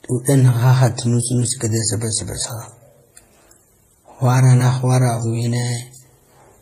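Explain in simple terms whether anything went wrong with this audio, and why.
Something went wrong across the whole clip. The speech carries several layers of compression damage at once, and nothing is left above 14.8 kHz. This is likely transcoding between lossy codecs: the audio was compressed, then compressed again by other formats, and each pass added new flaws.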